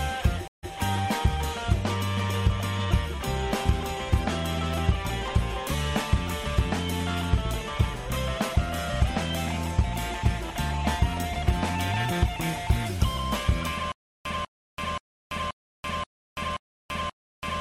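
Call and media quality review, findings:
Stream reconnect, 0.48–0.72 s: connection dropped, player reconnected and restarted the decoder mid-stream. About 151 ms of silence, then playback resumes roughly 93 ms earlier than where it broke off, a short repeat from the server resending buffered data.

Stutter with silent gaps, 13.92 s to end: player stall, likely a starved buffer retrying. The same 195 ms fragment replays 7 times, each followed by 334 ms of digital silence, a 529 ms cycle. Intervening audio lost.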